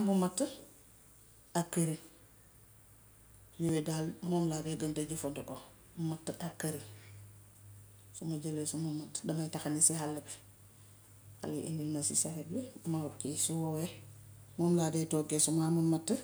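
In this speech recording, at 3.69 s a block of digital silence about 2 ms long appears, most likely because the output buffer was not filled in time. With no fade on either side, the abrupt drop and return are too short to be heard as silence and come across as a tick or a dip.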